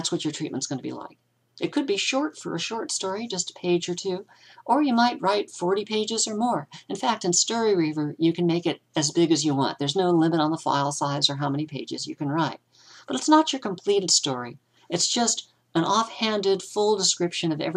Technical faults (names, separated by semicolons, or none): none